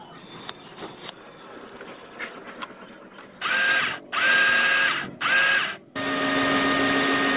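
No technical faults are audible.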